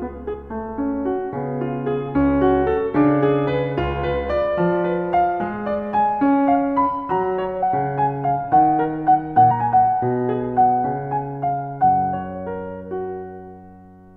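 Music with compressed frames skipped at 0.33, 7.62 and 9.50 s: the audio jumps forward by roughly 70, 200 and 150 ms, a few to several whole 26.1 ms frames lost or rejected by the decoder.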